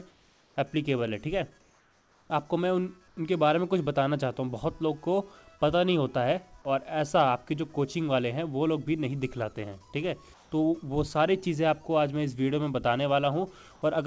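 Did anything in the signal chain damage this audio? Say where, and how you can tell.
Yes, at the call-processing stage: comfort noise in place of the background, in the pauses at 0.11–0.56 s, 1.61–2.30 s, 3.08–3.17 s and 10.34–10.52 s. There the faint background, about 33–37 dB below the loud parts, turns into a steady, featureless hiss, up to about 3 dB quieter. This is likely discontinuous transmission, where the receiver synthesises noise while the sender is silent. A dropout would leave true silence instead, and a noise gate would not fill the pause with noise.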